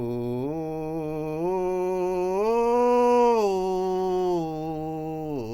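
No technical faults occur anywhere in this music clip. Nothing is heard that points to a problem in how the audio was captured, processed or delivered.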